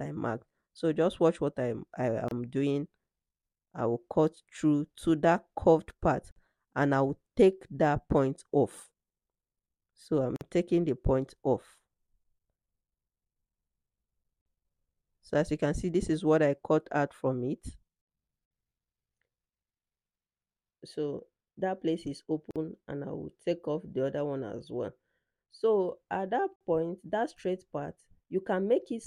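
The audio was encoded in separate pieces and joined without trimming, so each join keeps the encoder's start-up silence and the padding of the previous piece's last frame. The result is a gap at a join of encoded pieces every 4 s, at 2.28, 6.31, 10.36, 14.41, 18.46, 22.51 and 26.56 s. The first lasts about 29 ms and the rest 49 ms each. Each is a short dropout with smeared edges, after which the sound resumes where it stopped.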